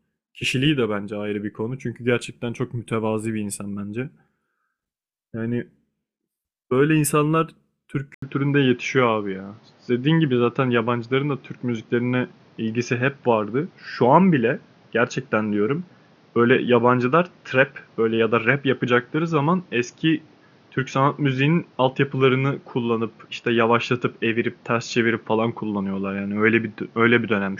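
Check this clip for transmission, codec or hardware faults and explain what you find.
One fault: at 8.14 s, after an 80 ms silence, the speech turns duller and nothing remains above 6.8 kHz, likely an input switched to a poorer device. The level also shifts by around 5 dB and a new background noise appears, about 35 dB below the speech. A codec bandwidth drop would not change the tone and noise this way.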